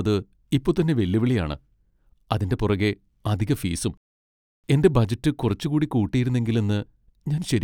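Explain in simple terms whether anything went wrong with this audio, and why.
Nothing to report here: no fault is audible anywhere in this speech recording.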